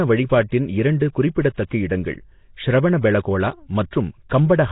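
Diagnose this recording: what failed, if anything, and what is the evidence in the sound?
The codec stage is the culprit here: the speech has a rough, hissy halo and a smeared underwater feel all the way through, with nothing above 3.8 kHz. That's likely Nellymoser compression, starved of bits, which fits a rate around 16 kbps, with empty bands filled with noise.

Same stage, same mechanism: pre-echo, a short hiss just before sharp attacks at 0.49–0.52 s, 1.00 s, 1.54–1.58 s, 3.91 s and 4.29 s, spreading 14 to 36 ms. Quantisation noise sized for each loud onset gets smeared across the quiet start of its block.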